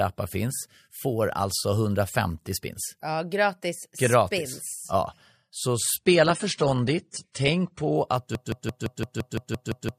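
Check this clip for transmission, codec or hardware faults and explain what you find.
Two faults are audible, both in the second half of the clip.

From 5.97 s to 7.97 s the clip drops to a lower-bitrate version of an adaptive stream. When the connection slows, the player switches to a leaner encoding, so the codec discards the top of the spectrum and quantises the rest more coarsely. Here nothing remains above 9.7 kHz and the speech turns dull and swirly, which fits a fall from around 96 to 32 kbit/s AAC. Unlike a dropout, the switch is instant and leaves no gap. Quality simply steps down for two seconds and then recovers.

From 8.35 s to the end, a 170 ms fragment repeats exactly, back to back, ten times. This is a broken-record loop, and the likely cause is a stall in the player, encoder or stream that kept resending the last fragment it held. The speech that should have followed is lost. 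What sets it apart from a stutter or echo is that each repeat is identical, with no decay and no advance, and it never resumes before the clip ends.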